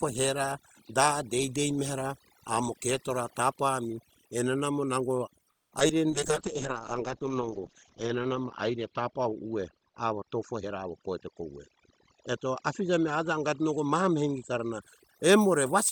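Across the whole clip, overdone noise removal has been applied to the speech. The background is pushed to near silence, with small twinkling specks where isolated frequency bands flicker on and off. The quieter parts of the voice fall under the suppressor's noise estimate and are thinned with it. A steady hiss or hum would sit evenly under everything. Here the residue is sparse and glittery, which marks heavy spectral subtraction.

Right after "enena amo nango", from 5.51 to 5.73 s, the audio stops for about 200 ms and then carries on from exactly where it left off, with nothing skipped. This call audio freeze was likely caused by delayed packets draining the jitter buffer, so the receiver had nothing to play. It differs from a dropout with lost content because the pause is inserted into the speech rather than cut out of it, and everything after it arrives about 200 ms later.

Just after that come two short concealed packet losses, at 5.79 to 5.82 s and 5.88 to 5.91 s. 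Here audio really went missing, about 20 ms and then about 40 ms, and the decoder covered each hole with roughly 10 ms of continued sound before blending back. Each is heard as a brief smear or wobble. Unlike the freeze, nothing is delayed. Instead a fragment of the speech is simply absent, and the second hole pulls the timing back by a few hundredths of a second.

From 5.94 to 6.12 s a jitter buffer slow-down follows. The receiver repeats individual pitch periods to rebuild its reserve, adding about 38 ms, so the speech runs at 83% speed. The pitch stays put while syllables stretch. That steady pitch is what separates it from a tape-style slowdown, where the voice would also drop lower.

From 6.12 to 14.88 s a call bitrate drop takes over. The sound turns rough and muffled, consistent with the encoder being throttled from around 32 kbps down to about 8 kbps. The top of the spectrum falls from 20 kHz to 8 kHz, and the worst stretch lasts about 1.65 s. 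A sudden brick-wall loss of highs together with coarse, gritty texture points to a codec starved of bits rather than to a filter or a bad microphone, which would dull the sound without the grit.

Inside that stretch are two jitter buffer speed-ups, each created by the receiver dropping short pieces of pitch periods to shed excess delay. The first, from 10.61 to 11.70 s, runs the speech at 112% speed and removes about 150 ms. The second, from 12.24 to 13.11 s, is milder at 106% and removes about 50 ms. In both the speech sounds hurried while its pitch is unchanged. That sets them apart from the earlier slow-down, which stretched the speech, and from packet loss, which leaves small holes instead of a steady rush.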